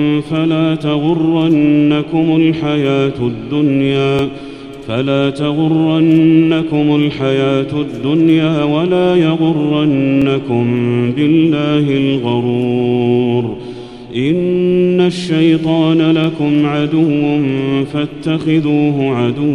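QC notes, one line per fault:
4.19–4.22 s, 10.22–10.24 s and 16.24–16.27 s: overlapping chunks. Each 6 s chunk begins before the previous one ends, so 25 ms of sound replays at every join as a brief stutter-click. The strict 6 s spacing and duplicated rather than missing audio distinguish it from dropouts.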